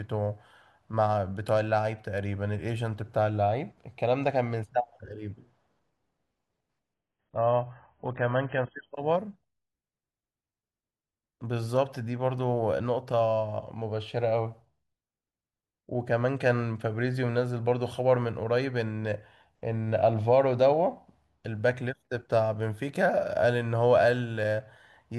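From 6.94 to 8.94 s the speech drops to a lower-bitrate version of the adaptive stream: for two seconds everything above about 3.5 kHz vanishes and the sound turns dull and swirly, which points to the player falling back to a much thinner AAC stream, with no gap at either switch.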